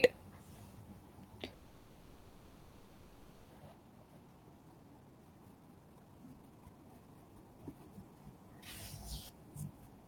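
From 1.53 to 3.52 s there is a call audio freeze. The sound stops moving forward and the last moment is stretched into a fading buzz or hiss, filling nearly two seconds. The likely cause is delayed packets draining the jitter buffer. Nothing is lost. Everything after simply arrives late.

From 3.78 to 8.12 s comes a jitter buffer speed-up. The receiver trims tiny pitch-period slices over and over to shed the built-up delay, about one and a half seconds in total. The audio plays at 133 percent speed at unchanged pitch, so it sounds rushed.

Inside that stretch, at 4.79 to 4.82 s, there is a skip ahead. Roughly half a second of audio is thrown away and playback jumps straight to later material. The join is almost seamless, with only a sliver of filler, so the cut is heard as an abrupt lurch.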